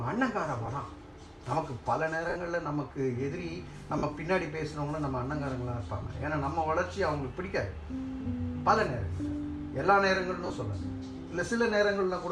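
The audio has lost LE Audio frames. You get short noisy smears at 0.66 s (20 ms), 2.29 s (70 ms), 3.98 s (50 ms), 6.03 s (20 ms) and a scattered patch from 10.46 to 10.56 s. Each time, the decoder replays the last spectrum with scrambled signs, and the longer gaps fade toward silence. The gap lengths fit 10 ms frames. Light lossy compression is also there, but its damage is slight.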